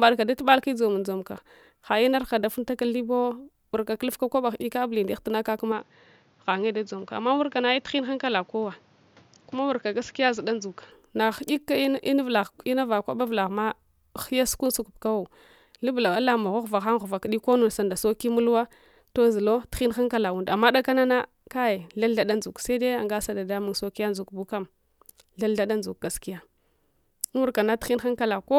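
At 5.72 s the speech suddenly loses its top end, with nothing above about 7.2 kHz, and drops a few decibels in level. A faint new noise floor comes in too, well below the voice. There's no gap at the change, and it all snaps back at 10.92 s. That pattern points to an input switched to a poorer device, likely a different microphone or a headset's call profile, before the system moved back to the original input.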